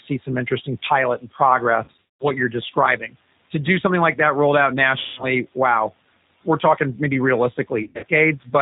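Speech carried over a G.729 codec, with plainly audible roughness and a synthetic quality that fits an 8 kbit/s voice codec; on a spectrogram the energy stops sharply at 4 kHz. Room noise sits about 21 dB below the speech. VoIP packet loss concealed by the speech codec occurs at 1.84–2.27 s, just after "like that rolled out" at 4.99–5.26 s, and at 7.83–8.05 s. Each event appears as a stretched, smeared stretch whose waveform envelope decays and stays weak briefly afterwards.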